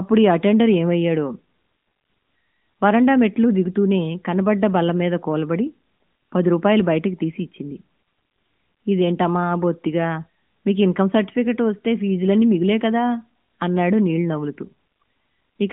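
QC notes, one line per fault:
No faults found.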